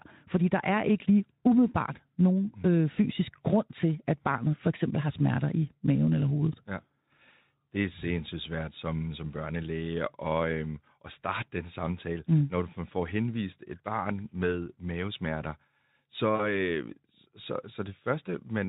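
VoIP packet loss concealed by the speech codec occurs at 16.35 to 16.42 s, a gap of about 40 ms that fits two lost 20 ms frames. With no new data arriving, the Speex decoder, whose coding damage is light, rebuilt the missing stretch by repeating its last pitch and filter settings at falling gain. The speech briefly smears into a stretched, fading sound, then stays weak or distorted as the decoder recovers.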